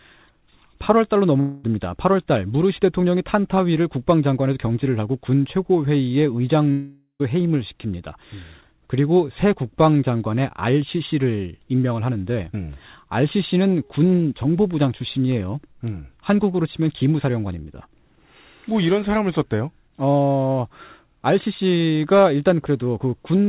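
Packets likely stopped arriving twice, a long network dropout at 1.40 to 1.65 s and again at 6.71 to 7.22 s. Each time the receiver stretched the last sound into a fading buzz, for about 0.23 s and then about 0.48 s. The second ends in roughly 100 ms of silence. The speech then resumes with about 0.24 s and 0.48 s of it lost. Throughout, nothing sounds above 4 kHz, which fits a G.711 A-law call path.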